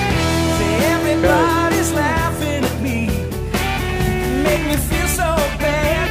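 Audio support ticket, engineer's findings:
Steady low 50 Hz tone with low harmonics from 3.37 s to end, roughly 10 dB under the signal. Mains hum: ground loop or nearby transformer coupling the power line into the path.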